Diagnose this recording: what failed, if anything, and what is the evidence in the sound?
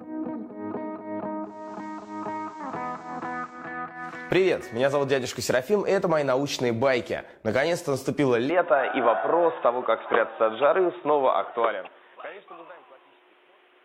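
Digital radio blending to analogue, at reception. From 1.39 to 3.80 s, a 0.4 s cross-fade to FM. Level drops about 3 dB. Faint hiss appears.

From 8.50 s to the end, the band narrows. There is no gap at the change, and a new, faint noise floor appears. Likely an input switched to a poorer device, at the driver stage.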